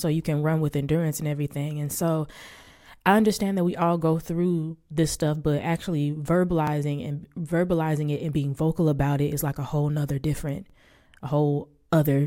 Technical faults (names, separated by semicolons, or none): overlapping chunks